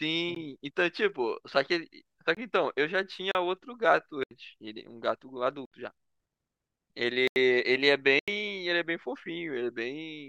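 The speech drops to a block of digital silence at 0.35 s, then 2.35–2.37, 3.32–3.35, 4.23–4.31, 5.65–5.72, 7.28–7.36 and 8.19–8.28 s. These are most likely buffers that weren't filled in time. The gaps run 15 to 85 ms, so you get anything from a tick to a short hole.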